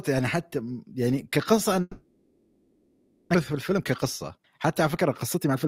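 At 1.81 s the sound breaks into a long network dropout, likely caused by audio failing to arrive for a stretch. Until 3.36 s the receiver fills the gap. It stretches the last sound into a buzz that fades. What remains is faint and steady, with only a brief moment of true silence. When sound returns, about 0.9 s of it is gone for good. Playback now sits roughly half a second later than before.

A jitter buffer speed-up follows from 3.50 to 4.44 s. The buffer now holds more audio than it wants. The receiver trims tiny pitch-period pieces again and again. Speech runs at 113% speed with unchanged pitch, shedding roughly 150 ms. It sounds rushed. A second speed-up runs from 4.84 to 5.67 s at 112%, removing about 100 ms more, with the same hurried feel.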